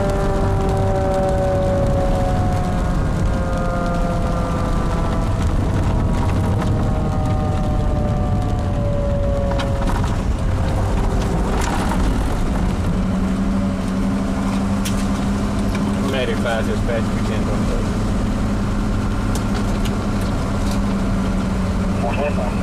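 Throughout the clip, a stage in the chain is driven about 6 dB past what it can pass, so hard clipping slices the peaks flat on a few percent of samples. Those squared-off tops add high harmonics, heard as crackle on the peaks.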